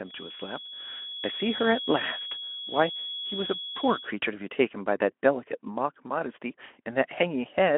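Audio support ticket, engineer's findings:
Thin, steady whistle at 3.4 kHz under the speech from 0.00 to 4.15 s, swelling and fading slowly in level, around 10 dB below the signal. Likely a feedback whistle: the loudspeaker-to-microphone loop is poised at the ringing point, so one tone sustains without running away.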